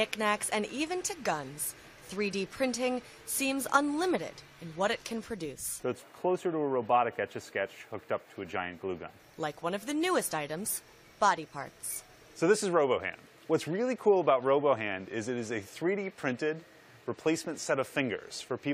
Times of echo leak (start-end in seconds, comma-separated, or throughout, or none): none